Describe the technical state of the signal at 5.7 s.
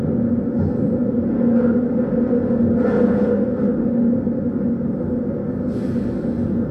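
The signal at 5.7 s is intact, with no technical fault audible at that point.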